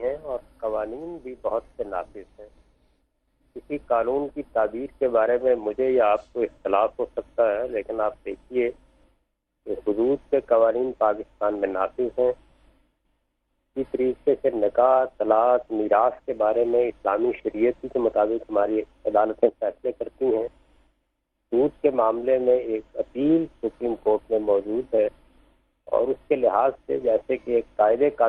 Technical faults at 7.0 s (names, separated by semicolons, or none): none